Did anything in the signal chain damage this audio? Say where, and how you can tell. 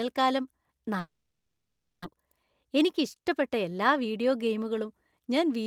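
Yes. From 0.99 to 2.15 s the speech breaks off into a fading buzz, then silence, and resumes with about 900 ms missing. This is likely a long network dropout: the receiver stretched the last sound, gave up, and the later delay shifted by roughly 150 ms.

From 2.64 to 4.06 s the speech runs about 7% fast at unchanged pitch, sounding slightly hurried. This is a jitter buffer speed-up at the network playout stage: the buffer trimmed small pitch-period slices, around a tenth of a second in total, to reduce excess delay.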